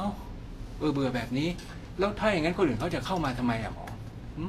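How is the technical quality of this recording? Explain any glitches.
The recording has plainly audible codec damage throughout. This is likely Vorbis compression at a low bitrate, in the region of 35 kbps. Nothing survives above 14.2 kHz, and the treble that remains is coarsely quantised into noise-like grain, leaving the speech hissy and rough with softened consonant attacks.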